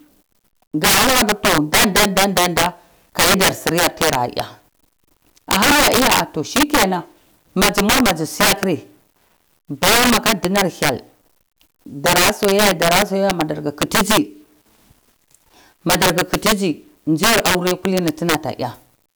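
Integer overflow runs through the whole speech clip: the signal is pushed about 15 dB too hot, and instead of being limited, anything past full scale wraps to the opposite sign. Only a small share of samples go over, but each loud peak snaps into a violent crack, far harsher than clipping.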